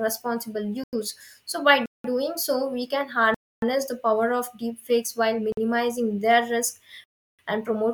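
The speech cuts out five times in blocks of digital silence: at 0.84 s for 93 ms, 1.86 s for 186 ms, 3.34 s for 279 ms just after "so we can", 5.52 s for 50 ms after "deepfakes while", and 7.04 s for 347 ms. Each is a block of silence, likely an output buffer not filled in time. The first two fit 4096- and 8192-sample buffers. With no fade, the sound cuts out and back abruptly, so the 50 ms one is a short hole and the longer ones are longer holes.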